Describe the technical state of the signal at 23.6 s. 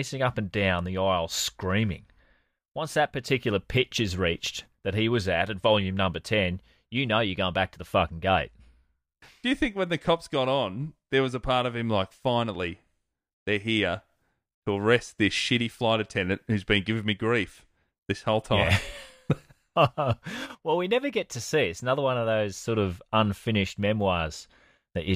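Around 23.6 s the signal is intact, with no dropout, distortion, glitch or other technical fault audible at that point.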